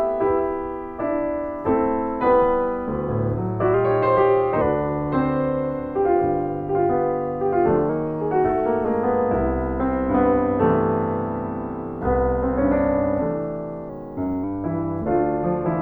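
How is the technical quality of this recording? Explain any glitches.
The recording has three brief pitch-and-speed jumps. From 3.74 to 4.61 s and 7.89 to 8.84 s the sound runs about 6% fast and about a semitone sharp, then snaps back. From 13.89 to 14.44 s it runs about 6% slow and about a semitone flat. These are likely drift correction steps, where clock-matching software abruptly changed the playback rate to manage its buffer.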